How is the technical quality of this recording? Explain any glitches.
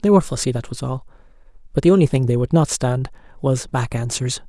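Nothing in this speech recording stood out as a technical problem on listening, so there are no glitches to explain.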